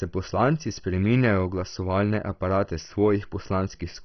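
Speech throughout, with heavy MP2 compression. Nothing is heard above 6.1 kHz, so it sounds dull. Starved upper bands flicker on and off, leaving a gurgling, granular texture. The likely cause is MPEG Layer II coding at a rate that fits about 32 kbps.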